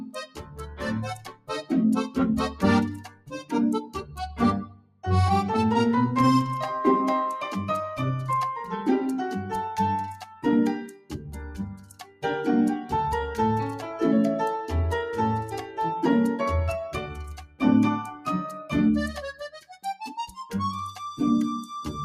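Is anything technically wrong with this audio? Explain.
Yes. A noise suppressor built for speech has been applied to this sound, and it causes audible damage.

It acts on the whole clip. The suppressor mistakes steady tones, ambience and decays for noise and pulls them down. Attacks pass through while sustained parts sink. The level swings by around 10 dB, so the sound pumps and thins out.

There are also four stretches where the suppressor cuts the sound more deeply. From 0.0 to 5.04 s the level drops by up to about 18 dB for roughly three seconds in total. From 10.18 to 12.24 s the drop reaches about 15 dB. From 17.07 to 18.72 s it reaches about 17 dB, and from 19.33 to 20.37 s about 14 dB. Held and fading parts sink or end early.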